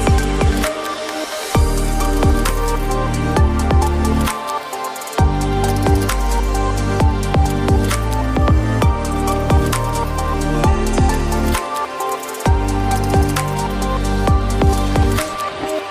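A voltage pulse, likely from a plug, switch, static discharge or driver glitch, was added to the signal twice, producing a loud pop from 2.49 to 2.51 s and again from 5.69 to 5.72 s, each a single sharp click peaking a little above the audio, which continues underneath.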